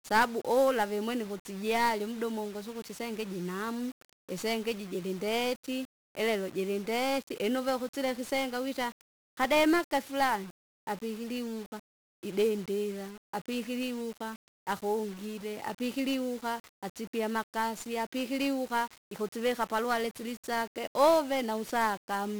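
From start to finish the speech carries heavy 1-bit DFPWM compression. Each sample keeps only a single bit that nudges an adaptive level up or down, so the waveform becomes a jagged staircase tracking the signal only roughly. That error shows as a dense broadband noise floor smeared across the whole spectrogram, drowning the upper bands in hiss. The result sounds fuzzy and crackly throughout, which fits a very low rate of around 48 kbps.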